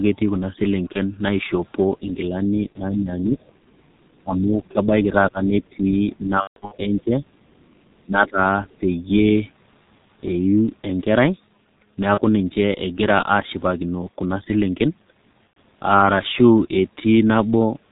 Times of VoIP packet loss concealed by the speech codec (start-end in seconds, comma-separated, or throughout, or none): 0.92-0.99, 2.72-2.81, 6.41-6.76, 12.14-12.21, 15.48-15.56